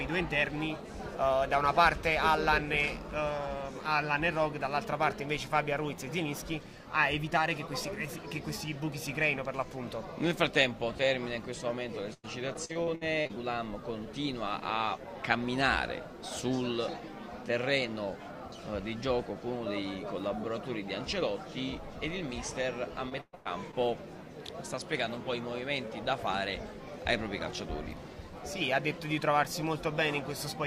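Choppy, robotic stutters from 12.13 to 13.31 s and again from 23.09 to 23.75 s: repeated packet loss, each hole of up to 100 and 120 ms patched by stretching the previous sound.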